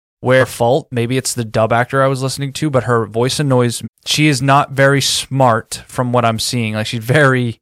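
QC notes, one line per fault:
Throughout, hard clipping: peaks in the speech crackle with a brittle edge, because the signal runs about 5 dB past what the chain can pass. Only a small fraction of samples are cut flat, but those squared-off tops add high-frequency harmonics.
0.40–0.44 s and 3.83–3.88 s (just after "but her voice annoys"), compressed frames skipped: the speech jumps forward. Roughly half a second, then about 0.7 s, of audio is lost. The jumps fit whole frames of about 46 ms.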